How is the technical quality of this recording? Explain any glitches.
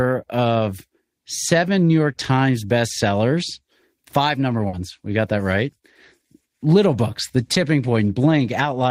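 The recording has two packet-loss glitches in the speech, one longer and one brief.

At 4.67 to 4.75 s, just after "bestsellers five number", there is a burst of packet loss. A run of audio data arrived too late or not at all, so the receiver extended the last sound for about 60 ms while fading it, then resumed about 60 ms further on. That stretch of speech is missing. It sounds like a short held buzz or hiss that dies away before speech jumps ahead. A spectrogram shows frozen, smeared sound that fades, then an abrupt restart. The waveform shows a repeating, shrinking pattern.

At 7.53 to 7.57 s there is a short concealed packet loss. Roughly 20 ms of audio never reached the decoder in time. The receiver patched the hole by continuing the preceding sound for about 20 ms and then cross-faded back into real audio. It is heard as a quick smear or wobble. A spectrogram shows a thin vertical band of blurred, slightly uniform energy. 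The waveform shows a tiny, overly regular segment at the seam.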